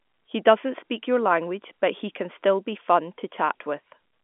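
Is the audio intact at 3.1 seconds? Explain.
Yes, the speech is intact at 3.1 seconds; nothing breaks or distorts there, and it keeps the narrow telephone band of G.711 telephone coding, with nothing above roughly 3.8 kHz.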